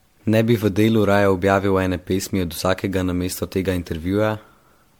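This is speech with generation loss throughout. It sounds swirly, smeared and hollow, and consonant attacks blur. Nothing is present above about 19.9 kHz. The likely cause is repeated lossy re-encoding, which fits around seven passes through MP3 at roughly 96 kbit/s.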